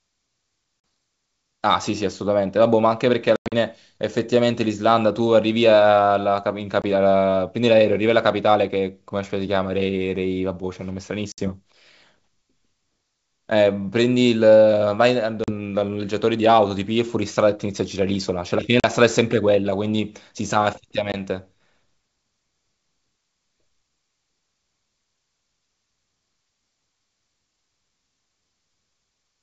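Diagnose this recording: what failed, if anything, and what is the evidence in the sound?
Network stage, packet loss on an ADPCM call, heard over the G.722 wideband link. There are hard-edged holes at 0.80–0.84, 3.36–3.54, 6.82–6.85, 11.32–11.49, 15.44–15.52, 18.80–18.85 and 21.12–21.15 s, which fits dropped 20 ms packets. Afterwards, the decoder's predictor and step size are out of sync with the sender's, so the speech returns slightly distorted before settling.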